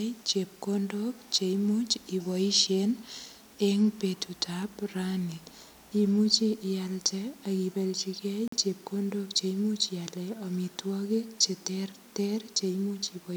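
Corrupt frame muted at 8.48 to 8.57 s, between "ialde ak ibelchigei" and "chepkondok che imuch": the decoder rejected a damaged frame and the player substituted 90 ms of abrupt silence, consistent with one lost frame.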